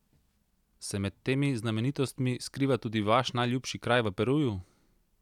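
No technical faults occur in this speech recording, so there are none to describe in time order.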